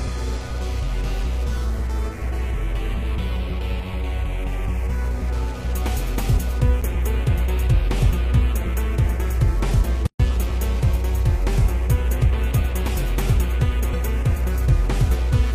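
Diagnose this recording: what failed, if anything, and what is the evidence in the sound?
The failure is at the codec stage: a gap at a join of encoded pieces. At 10.07 s the sound drops into silence for about 130 ms, resuming at 10.20 s exactly where it stopped. The edges are smeared by the codec. Separately encoded segments were joined without trimming encoder delay and final-frame padding.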